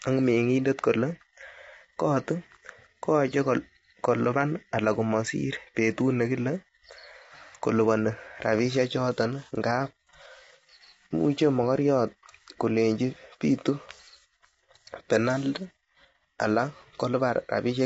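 A speech recording carries low-delay AAC compression damage from start to finish, and it is plainly audible. The voice sounds rough and grainy. Noise fills the gaps between the pitch harmonics, because at this low bitrate the coder quantizes coarsely and lets noise through between them. Nothing is present above 7.7 kHz, so the top band is cut away. The likely cause is AAC-ELD, the low-delay codec of video calls, run at a low bitrate that fits around 24 kbps.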